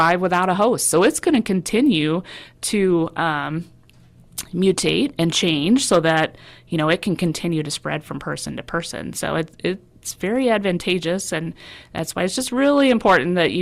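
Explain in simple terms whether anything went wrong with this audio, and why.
Yes, something went wrong: the speech has hard clipping in five places, at 1.75 to 1.97 s, 4.39 to 5.50 s, 5.92 to 6.24 s (just before "you know"), 10.57 to 10.92 s (just before "and that's why it's") and 12.65 to 13.46 s (right after "that's why it's just"). The loudest moments were too big for the recording chain, so their peaks were sliced flat, adding a harsh crackle. Unlike a steady background hiss, it comes and goes with the loud parts only, and it is worst around 6 s and near the end.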